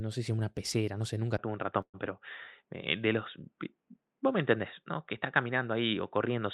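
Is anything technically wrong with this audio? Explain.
Yes. At 1.37 s the sound turns dull and boxy, with a 20 ms silence at the change, likely an input switched to a poorer device. From there to the end nothing passes above 3.8 kHz, and a faint new noise floor sits about 50 dB under the speech with no level jump. On a spectrogram the upper band is abruptly cut away.

From 1.81 to 1.96 s there is a call audio freeze, likely from delayed packets draining the jitter buffer. The last sound is stretched into a fading buzz, then 60 ms of silence, filling about 124 ms in all, before the audio resumes with nothing lost but 124 ms added delay. The waveform shows a decaying smear, then flat.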